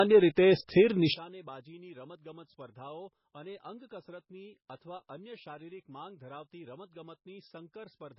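Low-bitrate audio saved at a high bitrate affects this speech clip throughout: nothing is present above 5.5 kHz, which points to a very low-rate MP3 around 16 kbit/s later re-encoded at something like 320 kbit/s. The larger second file cannot restore the discarded top end. One channel inverted appears from 1.14 s to the end: summed to mono, the voice drops by about 24 dB, leaving a faint residue. The likely cause is reversed polarity on one stereo side, so the shared centre content cancels.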